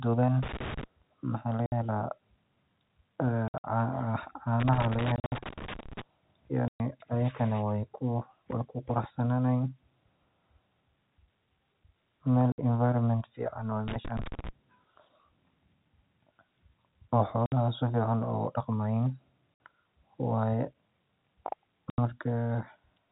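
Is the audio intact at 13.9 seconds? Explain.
No. Loose connector crackle runs from 13.88 to 14.49 s. A worn contact keeps breaking the signal, giving an irregular burst of scratchy crackle.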